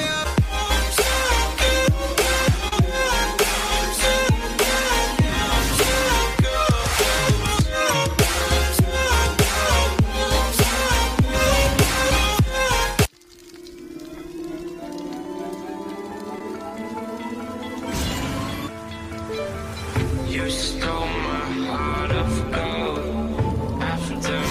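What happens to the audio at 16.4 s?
A short concealed packet loss occurs from 16.39 to 16.41 s. About 10 ms of audio never reached the decoder in time. The receiver filled the gap by extending the preceding sound for 13 ms, then blended back. It is heard as a brief smear or wobble.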